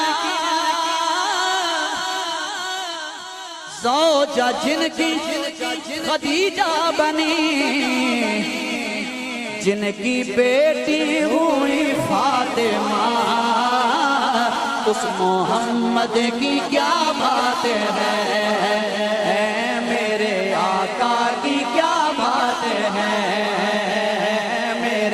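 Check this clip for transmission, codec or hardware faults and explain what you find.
Nothing in the clip points to a transmission, codec or hardware fault.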